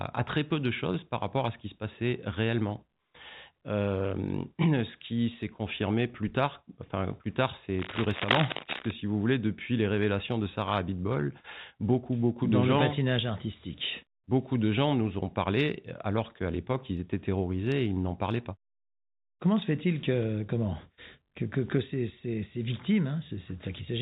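From 7.79 to 8.92 s, between "tard enfin plus tard" and "si vous voulez depuis", dense, uneven scratching runs nearly as loud as the speech. This is likely cable scratch noise from a worn contact whose resistance flickers as it moves. A spectrogram shows ragged broadband streaks, and the waveform shows jagged bursts.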